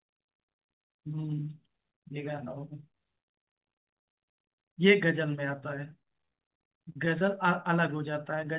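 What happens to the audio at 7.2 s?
Right around 7.18 to 7.22 s there's a short concealed packet loss. About 20 ms of the call arrived too late for the decoder, so the receiver stretched the preceding sound to cover the gap and blended back in. You hear it as a quick smear or wobble.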